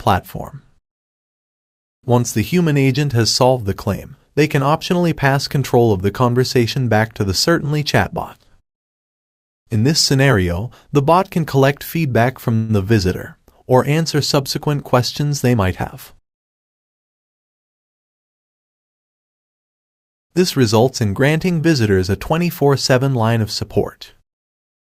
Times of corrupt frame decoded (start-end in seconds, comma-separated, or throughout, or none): none